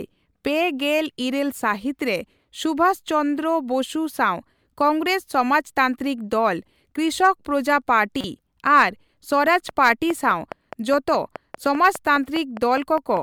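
A speech clip with two faults. At 8.21 to 8.24 s there is a brief glitch, the sign of damaged data in a compressed stream: the decoder hits corrupt frames, loses sync and jumps to the next valid header. From 9.48 to 13.18 s a train of clicks ticks at a steady 4.9 per second, about twenty pulses of near-identical shape, roughly 10 dB above the speech and continuing through pauses. That regular, repeated pulse rules out random crackle from a worn source and points to a likely cause in electrical interference or a faulty connection or power supply.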